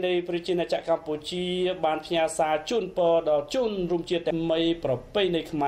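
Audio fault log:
4.30 s, stream segment skipped: there's a small blip and the sound abruptly jumps forward, as if a piece of the programme just went missing in between. The likely cause is one segment of the stream failing to load, with the player carrying straight on to the next one instead of waiting. Nothing fills the gap, so the audio on either side gets butted together, and that hard join is the tick you hear.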